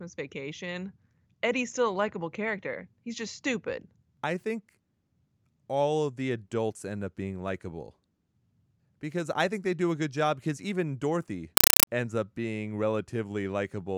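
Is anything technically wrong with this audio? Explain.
Yes. From 11.57 to 11.87 s, just before "ends up being", a compressed stream is played as audio. The Dolby Digital data, whose density fits roughly 256 kbps, is read as raw samples, not decoded, so each frame becomes a 5.33 ms noise burst and then zero padding, 31.25 times a second. It sounds like loud chattering static. The waveform shows dense blocks separated by flat silence, and the spectrogram shows evenly spaced broadband vertical stripes.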